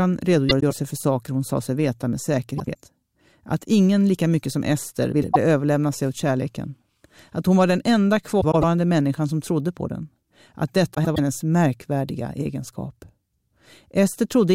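Speech clip with frames out of order: at 0.49–0.72 s (before "för saker hon sa"), 2.58–2.76 s (after "sa sig veta med"), 5.12–5.36 s, 8.41–8.64 s (between "hon var den enda" and "människan som trodde på") and 10.94–11.19 s, two adjacent blocks of about 105 ms (78 ms at 2.58 s) swapped places, consistent with short frame groups arriving out of sequence. Each stretch plays halves reversed, a garbled flutter, losing no time.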